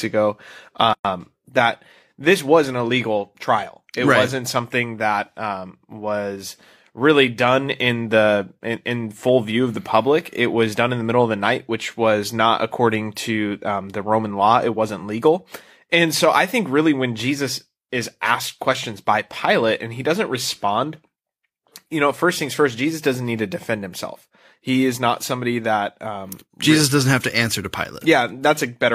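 A speech clip with a gap at a join of encoded pieces: a 115 ms gap from 0.93 to 1.05 s, just before "that this was an". Separately encoded segments were joined untrimmed, leaving encoder delay and end padding. Unlike a dropout, the speech resumes exactly where it stopped, with nothing lost.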